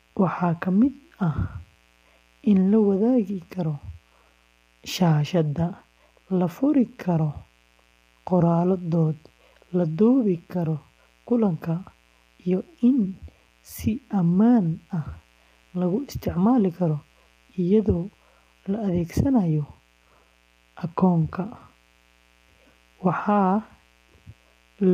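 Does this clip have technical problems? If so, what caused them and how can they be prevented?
Yes. A mains buzz runs through the whole speech clip, sitting roughly 40 dB below the voice. It is a steady, raspy tone built on 60 Hz. Sharp spikes, twice per mains cycle, come from a dimmer, rectifier or unshielded cable coupling into the signal chain. On a spectrogram it shows as evenly spaced horizontal lines at multiples of 60 Hz climbing into the kilohertz range, and the waveform carries a faint repeating ripple under the speech. To prevent it, use balanced, shielded cabling, keep audio lines away from dimmers and power supplies, and avoid ground loops.

The voice also sounds rough and grainy from start to finish, with a hiss-like fill between its harmonics and a top band that sounds thin or artificial. The likely cause is low-delay AAC compression, AAC-ELD of the kind used in video calls, at a low bitrate that fits about 32 kbps. 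On a spectrogram the harmonic stripes look smeared, with speckled noise between them and patchy, blocky energy above a few kilohertz. To prevent it, give the call or recording a higher bitrate, or capture the audio locally with a less constrained codec.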